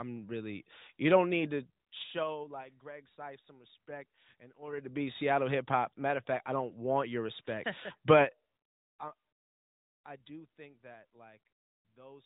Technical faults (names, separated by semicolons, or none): zipper noise